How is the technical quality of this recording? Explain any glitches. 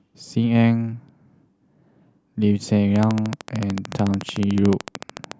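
There's one real glitch. From 2.96 s to 5.33 s, a train of clicks ticks steadily at 13.6 per second, about thirty sharp pops jumping roughly 10 dB above the speech, likely interference or a faulty connection or power supply.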